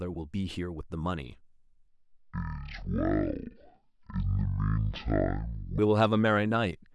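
From 1.88 s to 5.79 s a section at the wrong speed drags the speech down to half its pace, and the pitch falls with it by around ten semitones, so the voice turns deep, slow and thick. The likely cause is this stretch being played against the wrong clock. Because speed and pitch drop together at the same moment, this is not a pitch shift or a time-stretch, each of which would change only one of them.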